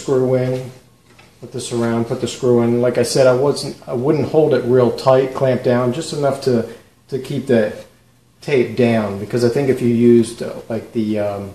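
No technical faults can be heard anywhere in the audio.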